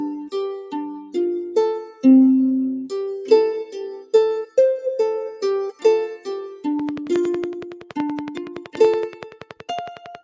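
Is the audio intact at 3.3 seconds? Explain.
No. At 3.3 seconds, as through the whole clip, a noise suppressor applied to music or sounds is at work. Built for speech, it mistakes sustained tones and reverb tails for background noise and pulls them down by around 10 dB, while attacks pass through, so held sound sinks after each onset and the sound pumps, flutters or thins out. Unlike a compressor's pumping, the level drops on sustained content rather than following loudness, and the thinning is not the call processing's normal band limit, which leaves nothing above 8 kHz.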